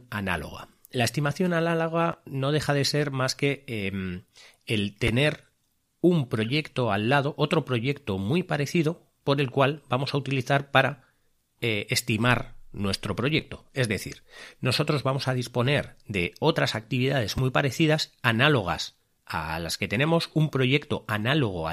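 At 2.12 s, just before "no deja de ser", there's a quick chunks-out-of-order glitch. It happens again at 5.07 s right after "más que em el", across 13.39 to 13.42 s, and at 17.37 s between "disponer de otras actividades" and "muy parecidas". Each time, a 5.8 ms slice of speech turns up one to three slots late, so nothing's missing, but the shuffled order and the hard joins make a tiny jumble.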